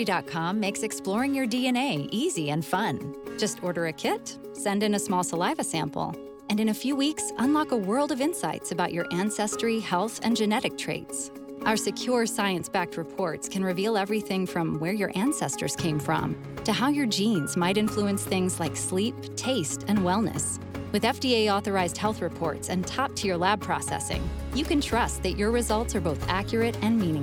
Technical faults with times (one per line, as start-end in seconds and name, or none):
none